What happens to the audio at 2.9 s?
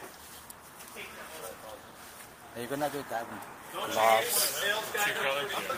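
Nothing goes wrong at 2.9 s; the audio carries straight through that moment with no audible fault.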